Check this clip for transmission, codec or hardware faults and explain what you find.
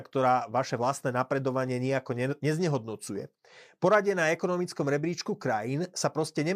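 Nothing found: the speech carries no audible faults anywhere in the clip.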